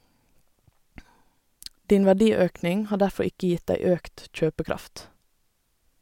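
No dropouts, clipping, glitches or other technical faults can be heard anywhere in the speech.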